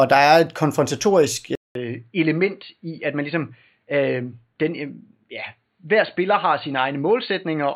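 At 1.55 s the speech drops out for about 200 ms, then returns duller and boxier, with nothing above 4.5 kHz, a level roughly 5 dB lower, and faint new background noise well beneath the voice. This lasts to the end of the clip. The abrupt change in bandwidth, level and noise floor is likely an input switched to a poorer device, such as another microphone or a headset's call profile.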